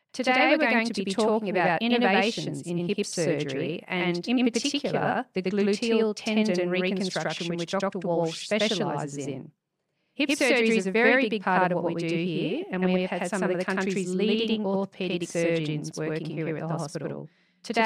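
From start to end, a channel delay (doubling) runs through the speech. One channel lags by 92.9 ms, which fits a 4096-sample buffer. Summed, it gives an equal-level slap echo.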